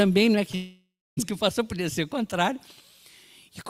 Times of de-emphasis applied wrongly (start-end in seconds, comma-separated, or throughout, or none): none